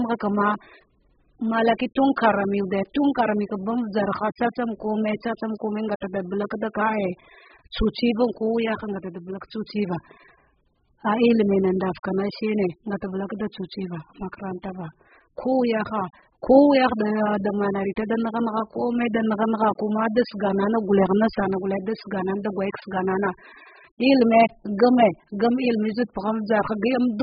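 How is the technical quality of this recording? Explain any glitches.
The technical quality is poor. The speech is heavily degraded by lossy coding from start to finish.

The whole clip sounds dull and smeared, with a warbling, fizzy edge on sibilants and held sounds. This is likely AAC compression at a very low bitrate, around 8 kbps: the encoder cuts everything above 5.1 kHz and quantises coarsely. A spectrogram shows a flat ceiling at 5.1 kHz.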